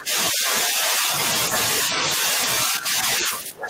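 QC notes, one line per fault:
0.00–1.12 s: speech suppressed in double talk. The level sinks by around 10 dB for about a second. The echo canceller likely couldn't tell the talker apart from loudspeaker echo while the far end was also talking, so it turned both down.
1.87–2.41 s: the same fault, but milder, with a dip of around 5 dB lasting about 0.4 s.
2.67–3.69 s: speech suppressed in double talk again. This is the deepest one, pulled down by around 15 dB right to the end.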